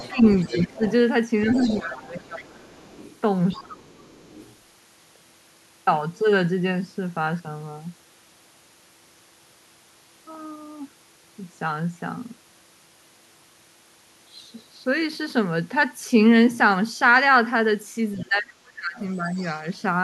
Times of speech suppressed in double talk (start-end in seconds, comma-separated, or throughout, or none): 0.10-0.82, 1.82-2.96, 3.56-4.14, 18.23-19.39